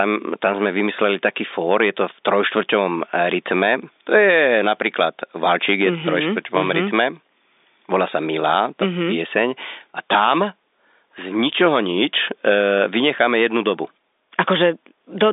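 Nothing is technically wrong with this speech recording.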